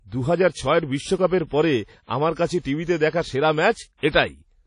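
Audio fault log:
throughout, WMA compression: the speech carries a washy, ringing quality and a hiss that swells and fades with the signal, with nothing above 10.1 kHz. This is likely a transform codec smearing quantisation noise across long blocks, which fits a low bitrate near 32 kbps.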